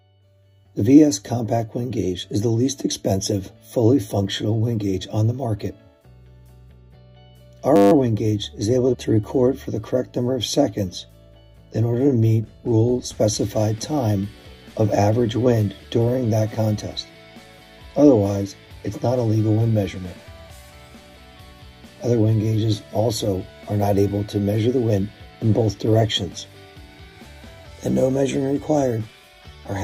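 At 7.76 to 7.92 s, a system hang loop: the system froze while the hardware replayed one 10 ms buffer sixteen times, producing a steady 100 Hz buzz.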